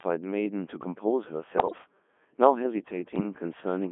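Robotic, buzzy speech runs through the whole clip, confined to a narrow band from about 200 Hz to 3.4 kHz, with heavy smearing of anything that doesn't fit a single clean voice. That is the Codec 2 vocoder at work. Instead of preserving the waveform, it sends only pitch, voicing, energy and a coarse spectral envelope, and the decoder rebuilds the speech from sine waves. The rate sounds like the 3.2 kbit/s mode.

From 1.57 to 1.78 s the voice breaks into warbling, bleepy gibberish, jumping abruptly in pitch, loudness and tone colour. These are bit errors on digital voice radio, at a rate of around 7 percent across a short burst that fits roughly eight vocoder frames. At such a low bitrate every flipped bit corrupts a whole frame's pitch, level, voicing or spectrum, so the resynthesised speech lurches instead of simply dropping out.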